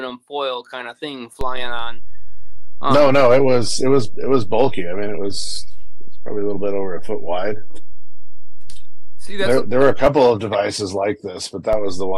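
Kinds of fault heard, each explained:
DC step: the waveform's zero line jumps abruptly to a fixed offset of about -14 dBFS, as when a converter recalibrates or an offset input is switched in. Here the offset appears at 1.41 s, holds until 10.06 s, then drops back, and returns at 11.73 s to stay through the end. Each transition produces a low thump or click while the sound itself carries on unaltered, so three thumps mark the changes.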